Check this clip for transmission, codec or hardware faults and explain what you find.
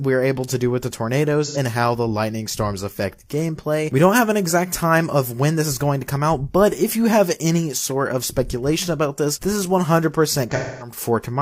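Two dropouts from AAC frame loss with concealment appear, at 1.45–1.57 s and 10.49–10.96 s. Missing frames were rebuilt from the last good spectrum. The short gap, about 85 ms and consistent with two lost frames, sounds like a smeared, noisy patch with blurred spectrogram detail. The longer one, about 256 ms and consistent with six frames, decays into near-silence and fades back. The waveform envelope sags, and the spectrogram shows a smooth dim band without transients.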